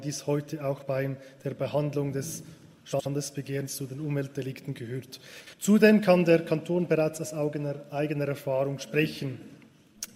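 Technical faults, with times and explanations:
0.77–0.83 s, 2.92–3.07 s and 5.40–5.54 s: frames out of order. In each spot, two adjacent chunks of audio got decoded in swapped order, so a brief stretch plays back-half first. That's the garbled flutter you hear. The first swap uses blocks of about 21 ms, consistent with single-frame swaps. The later two use 64 ms blocks, which fits runs of three frames. Nothing goes missing, only the order changes.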